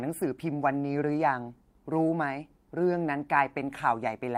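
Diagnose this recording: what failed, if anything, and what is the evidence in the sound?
Nothing stood out on listening to this speech recording that would point to a failure at any stage of the chain.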